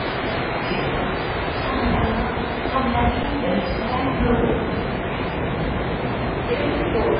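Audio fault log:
Throughout: MP3 compression. The audio has nothing above 5 kHz and a watery, swirling texture from weak frequency lines blinking on and off. That heavy damage points to a very low bitrate, near 16 kbps, and is likely MP3. Unlike a plain low-pass filter, it also smears attacks.
3.23 s and 6.09 s: underrun with held sample. The waveform freezes flat at its last level, for 11.6 ms and then 2.9 ms, which fits 512- and 128-sample buffers. About 10 ms and 3 ms of audio were missed meanwhile, unlike a dropout that falls to silence.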